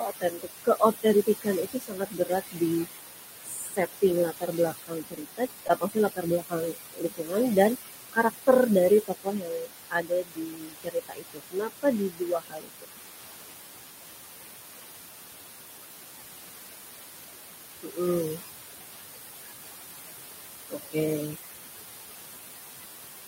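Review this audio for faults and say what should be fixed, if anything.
Converter idle tones: a faint whistle around 7 kHz comes through in the pauses, about 25 dB below the signal, and turns grainy beneath the speech. A delta-sigma converter running without dither settles into repeating bit patterns on small inputs, and those patterns form the tone. Enabling dither in the converter breaks up the patterns.

Noise suppressor artifacts: throughout the clip the background dips between phrases and swells back beneath them. The suppressor is attenuating bands it judges to be steady noise, frame by frame, against room noise only about 6 dB below the speech. A less aggressive suppression setting, or lower room noise at the microphone, reduces this.

Speech cut by the noise suppressor: word endings and soft sounds go faint or swallowed at 0.0–2.86 s (drops up to about 19 dB), 3.43–7.81 s (about 21 dB), 8.13–8.49 s (about 17 dB), 8.9–12.9 s (about 22 dB), 17.83–18.0 s (about 17 dB), 18.31–18.41 s (about 11 dB) and 20.7–21.37 s (about 18 dB). 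The suppressor is mistaking those parts of the speech for background and turning them down with it. Raising the speech-to-noise ratio or easing the suppressor's attenuation limit would keep them intact.

Short concealed packet loss: a brief smear at 5.67–5.71 s, where 20 ms of audio went missing and about 16 ms was filled by stretching the preceding sound before blending back. The decoder was concealing a gap in the stream that reached it too late or not at all. A larger jitter buffer or a steadier network path prevents it.

Lost packet rebuilt from error correction: the stretch at 5.69–5.71 s sounds rougher and noisier over 20 ms, which fits a single lost packet. The decoder played the low-bitrate copy carried in the next packet by Opus in-band forward error correction, and that copy lacks the upper frequencies. Reducing packet loss on the link removes the need for these rebuilt frames.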